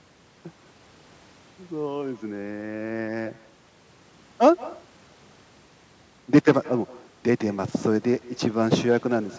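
Echo with no canceller runs through the whole speech clip, start to finish. At the far end the call is being played over a loudspeaker, and that microphone picks it back up with nothing to remove it. Every phrase returns after roughly 150 ms, about 21 dB below the direct speech, as a faint, thin shadow trailing each syllable. The call processing's bandwidth limit leaves nothing above 8 kHz.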